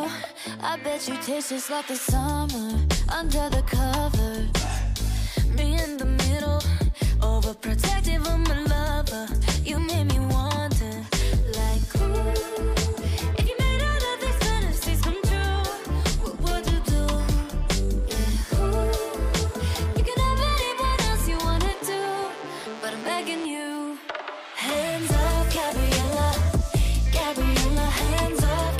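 No technical faults can be heard anywhere in the clip, so there are none to describe in time order.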